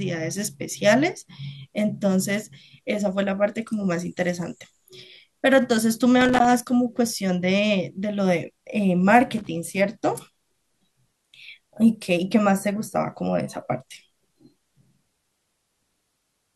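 A worn or dirty contact is making and breaking, producing loose connector crackle that chops the speech into irregular scratchy bursts at 6.21 to 6.50 s and 9.38 to 9.48 s.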